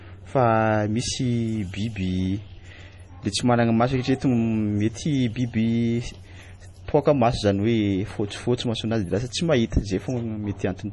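MP3 compression, likely the cause, runs throughout the speech: nothing is present above 11.3 kHz, and the heavy watery, swirling smear fits a low bitrate around 32 kbps, where the encoder drops the treble and zeroes weak frequency lines that flicker between frames.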